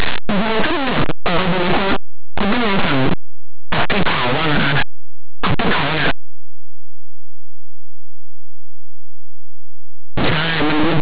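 A speech clip with linear audio read as companded, heard for its whole length. The sound is a very loud, harsh distortion throughout. Plain linear 8-bit samples are being expanded as if they were mu-law codes. Small values just to one side of zero map to the loudest outputs, and those on the other side stay tiny. Quiet passages therefore blast instead of fading.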